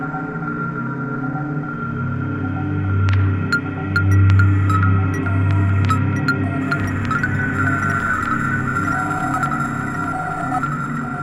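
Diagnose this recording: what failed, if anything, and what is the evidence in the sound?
Nothing failed; no audible defect in these sounds.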